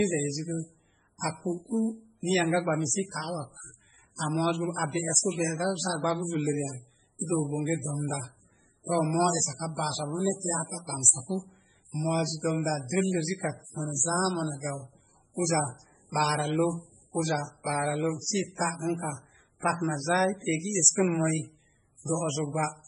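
MP3 compression runs through the whole speech clip, and is the likely cause of its watery, swirling character. Nothing reaches above 10.4 kHz, because the encoder has cut the treble at a fixed point to save bits. Weak frequency lines drop in and out from frame to frame, so s sounds turn metallic and chirpy and consonant attacks blur. Damage this heavy fits a very low bitrate in the region of 16 kbps.

Pre-echo appears from 4.16 to 4.19 s, a 36 ms smear of hiss just before a sharp onset. That attack sat late in a transform block, and the codec spread its quantisation noise across the whole block. Noise sized for the loud moment therefore leaked into the quiet instant before it. The same thing happens more briefly from 7.19 to 7.21 s, lasting about 24 ms. Both attacks sound soft and smudged rather than crisp.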